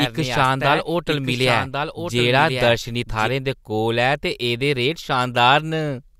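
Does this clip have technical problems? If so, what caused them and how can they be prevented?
Yes. A second, slower capture path or an out-of-step edit likely left a doubled audio track. From the start to 3.28 s, a full-band copy of the speech trails about a second behind, a few dB quieter, with no decay or room colour, then stops abruptly. To prevent it, route each source through one capture path only and check the edit for duplicate layers before export.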